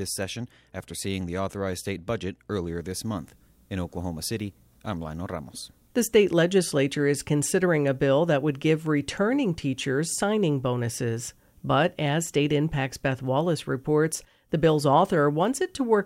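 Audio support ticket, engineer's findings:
No audible technical faults found on this speech recording; signal path and playback show nothing to flag.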